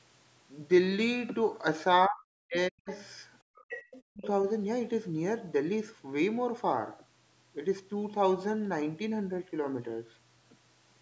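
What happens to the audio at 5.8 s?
Nothing goes wrong at 5.8 s: the speech continues intact through that moment, with only the normal character of call microphone processing, including its band limit at 8 kHz.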